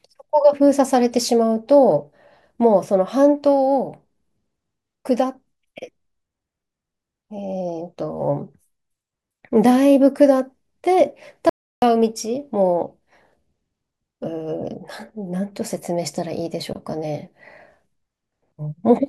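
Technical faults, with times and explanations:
11.49 to 11.82 s, audio dropout to silence: the speech just stops dead for about a third of a second, 328 ms, and the gap is silent with no room tone underneath. Then it picks up again mid-flow. That's the recorder carrying on writing silence after its input vanished, most likely a brief disconnect or glitch on the link, so whatever was said in that window is simply gone.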